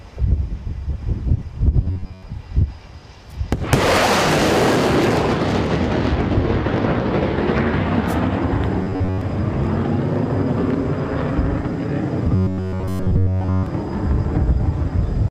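Audio likely arrived too seldom, so the last ~11 ms kept repeating: robotic sound from repeated short buffers at 1.83–2.23 s and 8.83–9.21 s, with most material repeated, then fully at 12.35–13.66 s, giving a rigid metallic 93.8 Hz buzz.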